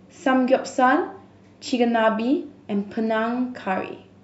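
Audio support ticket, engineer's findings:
Nothing turned up on a full listen to the speech, so there's no fault to log on this one.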